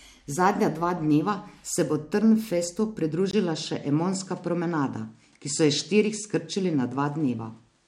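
Speech, and at 3.31 s, after a brief 20 ms dropout, the top end vanishes above 10.5 kHz with faint new noise underneath; likely an input switched to a poorer device.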